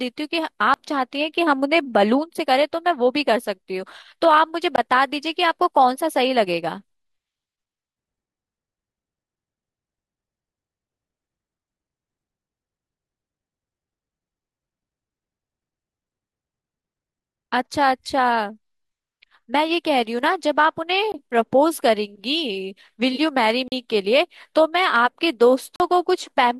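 Five blocks of digital silence cut into the speech: 20 ms at 0.74–0.76, 4.76–4.78 and 21.12–21.14 s, then 40 ms at 23.68–23.72 and 25.76–25.80 s. The sound just cuts out with hard edges, so you get brief holes.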